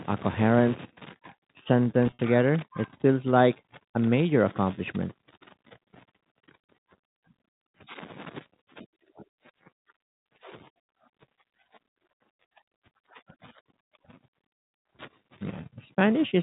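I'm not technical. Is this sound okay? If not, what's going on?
No. From 2.07 to 2.19 s there is packet loss with pitch repetition. Small pieces of the speech, about 80 ms in total, got lost on the way, and the receiver filled each gap by repeating the last bit of voice. You hear a brief buzzy, held sound there.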